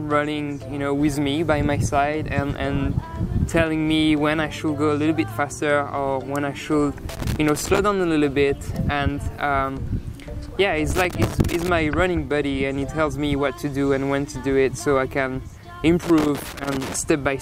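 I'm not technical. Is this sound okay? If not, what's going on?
No. Loose connector crackle appears at 7.09–7.79 s, 10.91–11.69 s and 16.03–16.96 s, where a worn plug contact cuts in and out, causing scratchy bursts.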